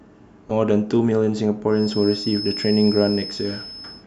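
At 0.47 to 0.51 s, a brief glitch cuts into the speech where damaged data in the compressed stream throws the decoder off its frames until it finds the next header.

From 1.67 s to the end, a thin, steady whistle at 5.2 kHz sits roughly 10 dB below the speech, swelling and fading slowly in level, likely a feedback whistle from a loudspeaker-to-microphone loop held just short of runaway. Unlike howling feedback, it never grows.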